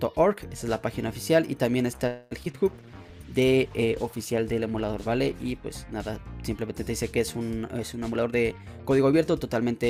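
From 2.07 to 2.33 s the packets were held up in transit and the jitter buffer ran dry, most likely a call audio freeze. The receiver stretched the last sound into a fading buzz or hiss for about 237 ms, then resumed where it stopped, so nothing is lost but the delay grows by that much.

Right after, three short concealed packet losses follow at 2.43 to 2.46 s, 2.46 to 2.48 s and 2.52 to 2.55 s. Each time about 20 ms never reached the decoder and was patched by continuing the previous sound. They come across as quick smears, and the second one trims the delay by roughly 20 ms.

From 2.69 to 5.62 s a call bitrate drop takes the encoder from 96 to 17 kbps, staying at the bottom for about 2.8 s. With so few bits the coding turns coarse and the top end is cut, leaving the sound rough, watery or muffled.

Inside that stretch, from 2.86 to 3.10 s, a jitter buffer slow-down repeats pitch periods to rebuild its reserve. 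It adds 42 ms and plays at 86% speed, so the sound drags at unchanged pitch.

From 8.01 to 9.83 s a jitter buffer speed-up trims short pieces to shed excess delay. It removes roughly a fifth of a second and runs at 113% speed, so the sound is audibly hurried.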